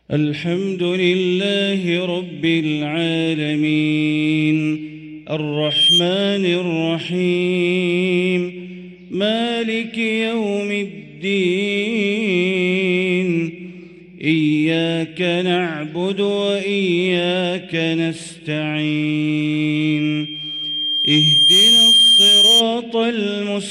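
Loudspeaker feedback squeal appears from 5.53 to 6.07 s and again from 19.74 to 22.66 s. A microphone is picking up its own loudspeaker, and the loop runs away at 3.2 kHz. The first tone swells within a fraction of a second. The second builds over about two seconds and ends roughly 10 dB above the sound.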